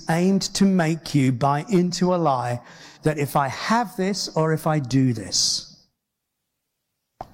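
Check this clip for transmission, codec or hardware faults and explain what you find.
One codec fault is present: AAC frame loss with concealment, from 2.87 s to 2.98 s, between "buy into a lie" and "that if I have". About 85 ms of coded audio went missing, which fits two consecutive lost frames. The decoder filled the hole by reusing the last good spectrum with scrambled or interpolated components. That span sounds smeared and noisy, a brief phasey patch in the speech rather than a clean dropout or silence.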